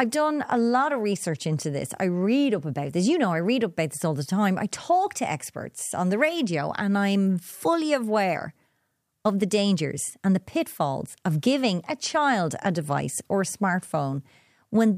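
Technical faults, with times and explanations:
No technical faults detected.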